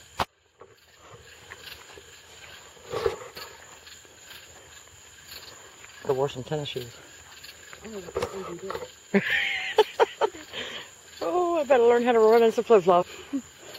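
Damaged data in the compressed stream knocks the decoder out of sync at 6.09 s, 10.27 s and 13.01–13.03 s, each a brief glitch.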